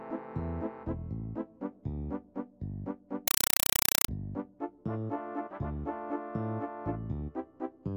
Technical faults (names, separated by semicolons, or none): compressed stream played as audio